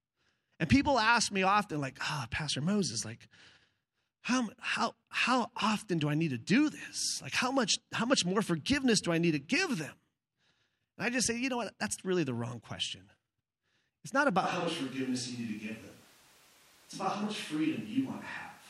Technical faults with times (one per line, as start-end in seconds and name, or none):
14.45-18.70 switch to a distant microphone